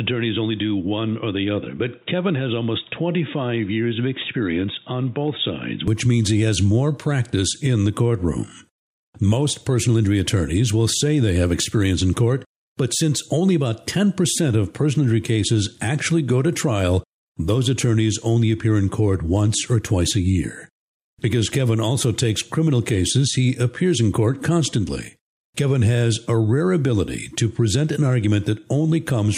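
From 0 to 5.88 s the speech is dull and band-limited, nothing above 3.8 kHz, quieter, with a faint new noise floor, likely an input switched to a poorer device, clearing before "means he has more".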